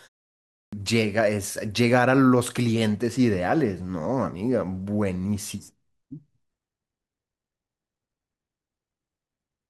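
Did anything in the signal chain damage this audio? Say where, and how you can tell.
Yes. The damage sits at the playback stage: a clipped start after a pause. The clip opens with about 0.46 s of silence, and when speech begins at 0.46 s its opening is missing up to 0.73 s, so roughly 266 ms of sound is swallowed and the first word starts abruptly without its initial sounds. The output device had dropped into a low-power state during the silence and was still waking or relocking when signal arrived.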